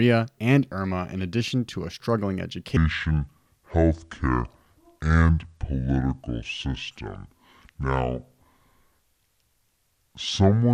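From 2.77 s, right after "addition to a struggling", the speech suddenly turns deep and dragging, dropping roughly seven semitones and slowing to 0.62 times its proper pace. It stays that way to the end of the clip, through "tell me how in". This is a section at the wrong speed: speed and pitch fall together, which is likely from that stretch being played against the wrong clock, stretching every syllable and lowering the whole voice at once.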